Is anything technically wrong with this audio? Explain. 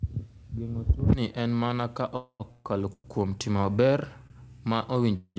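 Yes. The clip has two kinds of network-timing fault on a call path whose G.722 coding leaves nothing above 8 kHz.

Call audio freeze, at 2.16 to 2.42 s just after "tuoni en mana ka", 2.52 to 2.67 s just before "kuom timo", 2.93 to 3.06 s just after "kuom timo", and 5.16 to 5.38 s: packets were likely held up in transit, so the jitter buffer emptied. The receiver extended the last sound as a fading buzz, reaching silence for about 80 ms, none, 50 ms and 50 ms respectively. Speech then resumes where it stopped, with nothing lost, only delayed by 237, 134, 111 and 197 ms.

Short stall from a late packet, at 4.27 to 4.32 s: one packet missed its playout moment and the buffer briefly ran dry. The receiver stretched the preceding sound for about 29 ms until it arrived, giving a slightly held, faintly buzzy moment with nothing missing.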